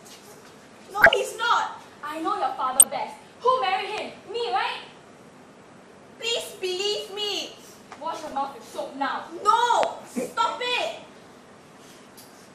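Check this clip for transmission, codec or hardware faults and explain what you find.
Three things turn up: MP2 compression across the whole clip, five bursts of DAB burbling, and two loud pops.

The MP2 compression runs the full length. The top end sounds dull, and there's a gurgly, grainy texture throughout. That's likely Layer II coding at around 80 kbps, which is tight enough that the encoder runs short of bits for its 32 sub-bands. It drops the upper bands, sometimes flickering them in and out, and coarsely quantises the bands it keeps. The damage is plainly audible, with that familiar low-rate digital radio character.

DAB burbling shows up at 0.90 to 1.14 s, 2.73 to 2.96 s, 4.40 to 4.42 s, 6.25 to 6.33 s and 8.19 to 8.37 s. Each burst brings short blips of noise in single sub-bands. This is what happens when bit errors slip past error correction into the MP2 data. Corrupted samples throw noise into individual sub-bands, and any bad scale factors that get through make a band jump in level for up to a frame.

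The loud pops come at 3.98 to 4.00 s and 9.83 to 9.85 s, one each. Both are sharp, sudden hits sitting on top of the sound, which carries on underneath. The first peaks about 15 dB above the signal and the second about 25 dB. Each is likely a voltage step or pulse from a plug, switch, static discharge or driver glitch, which the following circuitry then shapes into the pop.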